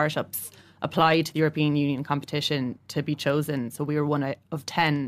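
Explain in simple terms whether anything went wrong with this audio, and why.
Nothing went wrong here.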